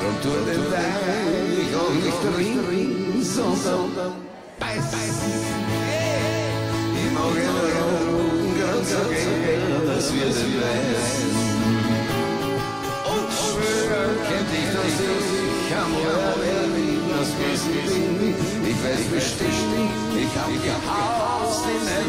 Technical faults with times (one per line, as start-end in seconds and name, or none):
0.00-22.08 doubled audio track